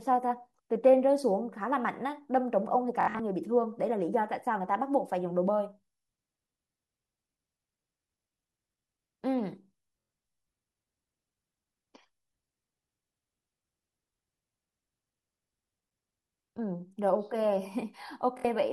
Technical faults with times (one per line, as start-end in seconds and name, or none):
3.01-3.19 Bluetooth stutter
10.01-10.10 Bluetooth stutter
18.38-18.45 Bluetooth stutter